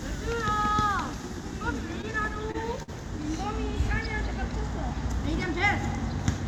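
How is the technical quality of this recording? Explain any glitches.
The recording has one clear problem: a burst of repeated stalls (stutter) between 2.01 and 2.90 s. Seven short hitches interrupt the sound there, the longest about 52 ms, together adding roughly 124 ms of held-over audio, about 14% of that stretch. The stream was arriving more slowly than it played, so the playback buffer kept running dry, and each time the last bit of sound was extended until fresh audio came in. Unlike dropouts, nothing is cut away. The sound drags and catches rather than going silent.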